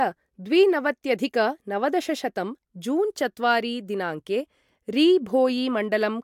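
Nothing in this speech recording stands out as a technical fault at any point, so there's no problem to describe here.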